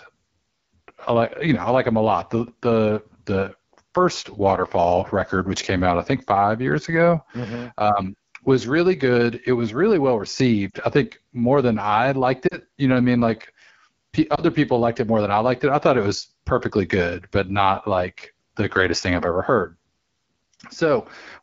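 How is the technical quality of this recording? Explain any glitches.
The quality's fair at best: the speech runs through a heavily squeezed codec for the whole clip, and there are three short dropouts around the middle of the clip.

First, the AMR wideband (HD Voice) codec. The wideband range up to about 7 kHz is there, but at this setting the model of the voice gets coarse, so voiced sounds come out rough and a bit raspy. That roughness fits one of AMR-WB's two lowest rates, around 8.85 kbit/s. The top edge, above about 6.4 kHz, is filled with shaped noise, not real detail.

Second, lost AMR speech frames at 10.69 s, 12.48 s and 14.36 s. Errors on the radio link made the decoder reject these frames, so it bridged each gap by replaying the last good pitch and vocal tract settings at falling gain. The first two sound like a quick drop to near silence of about 40 ms, which fits two lost frames. 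The third is a shorter 20 ms dip or warble, about one frame, and the voice comes back briefly thin each time.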